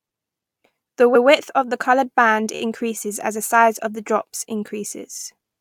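Repeated frames occur three times in this speech. At 1.14 s, a 128 ms stretch plays once more. At 2.55 s, a tiny 13 ms slice loops four extra times, giving a rapid stutter. At 5.17 s, a 43 ms block plays twice more. In each case the decoder received the same compressed segment again and simply replayed it, so the sound catches and repeats before moving on, adding about 0.27 s to the audio.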